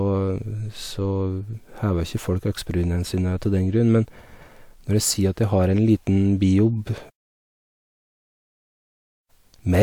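No technical faults can be heard anywhere in the recording.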